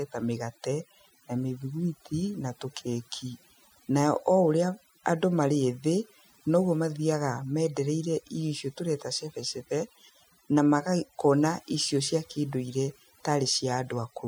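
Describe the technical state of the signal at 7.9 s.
At 7.9 s the background is pulled down and flecked with twinkling specks. That is overdone noise removal, present across the whole clip: an over-aggressive reducer is cutting individual frequency bands that sit near its noise estimate, taking quieter speech detail with them.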